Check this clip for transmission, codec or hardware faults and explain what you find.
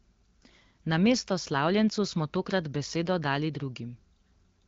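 Nothing faulty can be heard: the speech comes over an AMR wideband (HD Voice) link at 12.65 kbit/s with only light coding damage, and the band is empty above 7.5 kHz, as expected for that codec.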